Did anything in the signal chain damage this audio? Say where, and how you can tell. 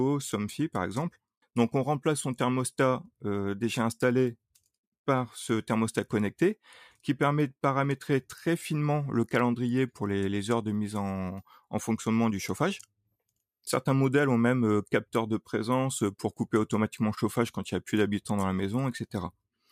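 No, nothing along the chain seems to have damaged this speech recording, and there's no point in it where any stage can be heard leaving a mark.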